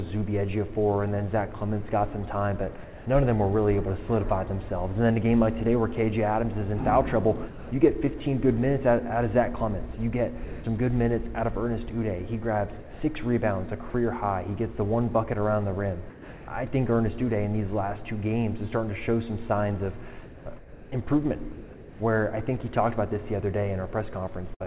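At 2.84 s the sound gives way to a steady, featureless hiss for about 220 ms and returns at 3.06 s, with roughly 140 ms of real sound gone. This is sound dropped by the voice detector, most likely from the sender judging a quiet stretch to be background and pausing transmission while the receiver generated comfort noise. It is a single clean hand-off to noise and back, with none of the repeated switching of a chopped passage.

From 7.48 to 8.2 s, 9.94 to 10.64 s and 12.8 to 13.94 s the sound is chopped by the voice detector. In each stretch the sender's detector likely flipped on and off more than once, so quiet edges are repeatedly swapped for synthetic noise, about 260 ms, 240 ms and 240 ms in total. The repeated holes set these apart from a single dropout.

At 16.1 s a second dropout by the voice detector replaces about 380 ms with comfort noise and loses roughly 240 ms of sound before it resumes at 16.48 s. 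The cause is likely the same misjudged quiet passage.

From 20.24 to 22.0 s comfort noise stands in place of the background, likely because the sender stopped sending during a pause. For about a second the real ambience is replaced by a smooth, detail-free hiss. Within this stretch, at 21.52 to 22.0 s, the sound is also dropped by the voice detector, likely cut off by the same gating, so around 290 ms of actual sound vanishes into that noise rather than surfacing.

At 24.54 s a burst of packet loss leaves about 60 ms missing. The receiver carries the last sound forward and fades it over about 59 ms, and the audio resumes at 24.62 s with that piece gone. The fill is a short smeared continuation of what came before, not a steady synthetic noise, and that separates it from the detector faults. The band-limit of the call path, with nothing above 4 kHz, fits G.711 A-law at 64 kbps.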